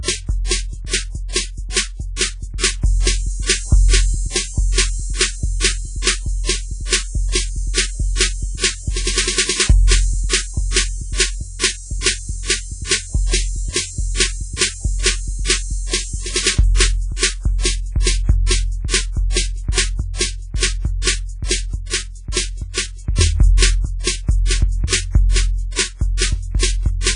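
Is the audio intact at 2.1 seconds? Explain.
No. At 2.1 seconds the music carries the same damage it has throughout, and it sounds like WMA compression. The treble stops dead at about 10.1 kHz. Below that, transients ring and smear, and a hiss swells and fades with the music. A transform codec spreads its quantisation noise across long blocks and zeroes weak spectral lines when bits are scarce. The heavy damage points to a very low bitrate, around 24 kbps.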